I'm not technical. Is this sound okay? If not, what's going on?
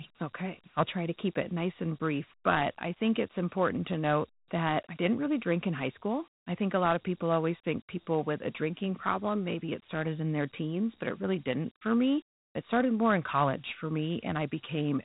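No. The whole recording carries Dialogic VOX ADPCM, an old phone-system format. Nothing above about 3.9 kHz survives, so speech sounds muffled, with gritty hiss.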